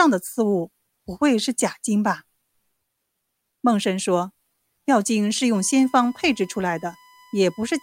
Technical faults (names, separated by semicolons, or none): USB whine